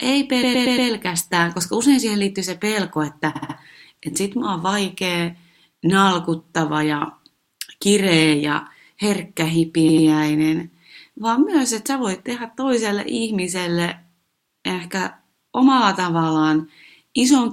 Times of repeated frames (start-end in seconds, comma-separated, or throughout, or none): 0.42-0.89, 3.35-3.56, 9.88-10.07